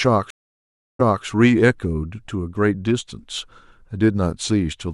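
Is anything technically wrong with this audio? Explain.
Yes. A stream reconnect occurs from 0.30 to 1.25 s. The connection dropped, leaving 0.69 s of silence, then a restarted decoder resumes the speech 0.26 s earlier, repeating a short stretch.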